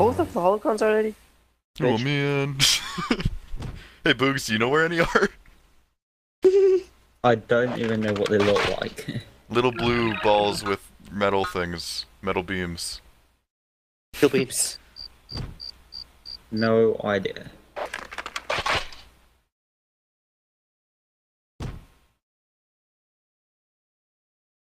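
At 4.32 s there's a call bitrate drop that lasts until about 8.27 s. The connection's bandwidth estimate fell, so the encoder was told to squeeze the audio into far fewer bits and started coding it much more coarsely. You can hear the sound go rough and a bit smeared, with the top end cut away, for nearly 3.9 s. That fits the rate falling from 48 kbps to around 18 kbps before climbing back.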